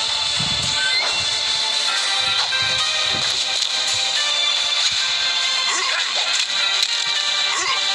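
No technical faults are audible.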